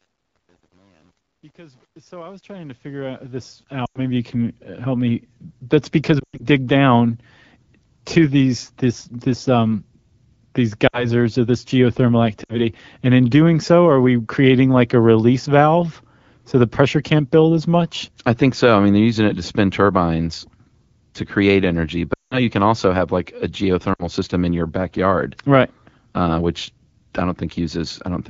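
From the start to 4.32 s, the fade-in shows truncation distortion. The gain stage keeps too few bits and adds no dither, which fits roughly 9-bit resolution. The quiet opening, worst from 0 to about 3.3 s, turns into coarse square steps and sounds gritty, until the level clears just before "help me".

Lost AMR speech frames follow. Corrupted frames were concealed by repeating the last good pitch and vocal-tract settings at falling gain, so each gap sags before the sound returns thin. They fall at 3.85 to 4.00 s (100 ms), at 6.20 to 6.46 s (140 ms scattered over 200 ms, longest run 100 ms), at 10.87 to 11.07 s (60 ms), at 12.43 to 12.57 s between "or this geothermal" and "and in doing so" (60 ms), at 22.13 to 22.43 s between "to create energy" and "can also have like" (180 ms, dropping to near silence), and at 23.93 to 24.06 s (60 ms).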